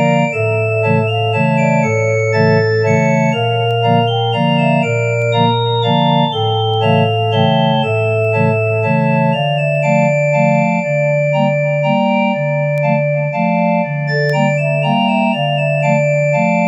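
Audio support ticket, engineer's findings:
Word clock ticks: sharp ticks of uneven strength, roughly every 1.5 s from 0.69 to 15.81 s, about ten in total. Receiver is likely free-running, not locked to the source. A clock mismatch of around 15 ppm slips one sample per tick.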